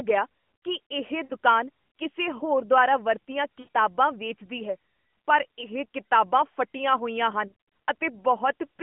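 Speech over a narrowband mobile line has lost AMR speech frames at 1.24–1.33 s, 3.60–3.68 s and 7.48–7.52 s. Each is a smeared, fading stretch where the decoder repeated its last good settings, not a hard dropout or click.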